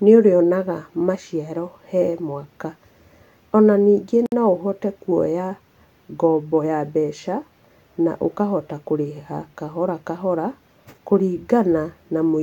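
At 4.26 s the speech drops into a 60 ms silence, a gap at a join of encoded pieces, before resuming with "no ũhote kuoya". Untrimmed encoder delay and last-frame padding leave a near-empty vertical stripe on the spectrogram, its edges smeared.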